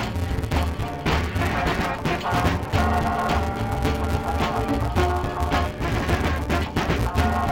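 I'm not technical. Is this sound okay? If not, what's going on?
No, the whole thing sounds dull and robotic, with a steady buzz at about 172 times per second. It's interleaved audio read as planar: left and right were shuffled together in tiny 5.8 ms chunks, which fits 256-sample blocks, but got pulled apart wrongly.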